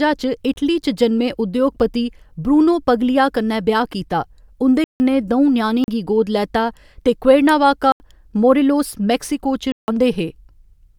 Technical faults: block of digital silence

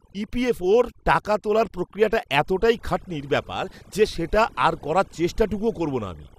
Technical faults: overdone noise removal; DAB burbling

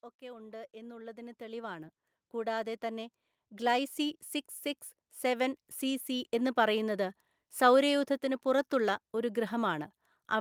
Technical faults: automatic gain rising

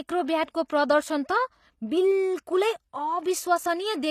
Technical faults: HE-AAC compression; pre-echo

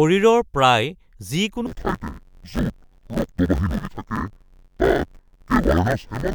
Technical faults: interleaved audio read as planar

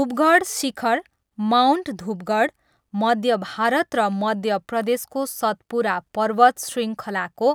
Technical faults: none

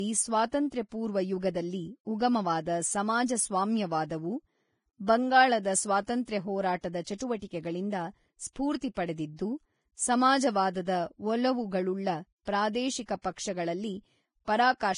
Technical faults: Vorbis compression; pre-echo

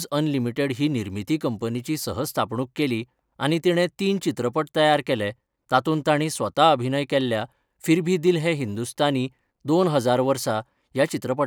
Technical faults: none

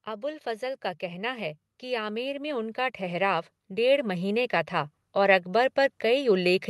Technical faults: automatic gain rising

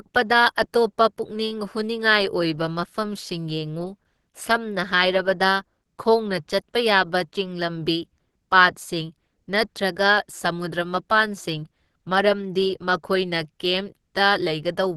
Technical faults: Opus compression

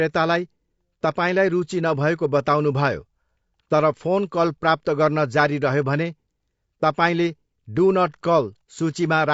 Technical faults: low-delay AAC compression

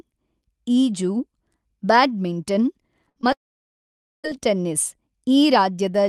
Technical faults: burst of packet loss; short concealed packet loss; long network dropout

